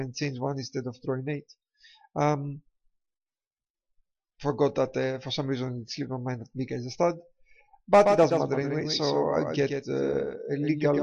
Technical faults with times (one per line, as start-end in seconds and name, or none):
8.01-11.02 doubled audio track